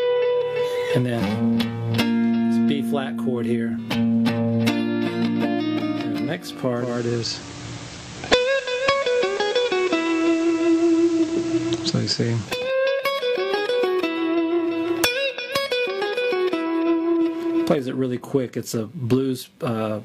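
From 6.74 to 12.71 s the receiver performs a digital radio blend to analogue FM, cross-fading over 286 ms. A spectrogram shows a raised hiss floor roughly 20 dB under the signal. The waveform level shifts by about 2 dB.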